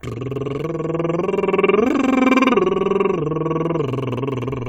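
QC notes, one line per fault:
Nothing here to flag, the music just runs along without anything jumping out.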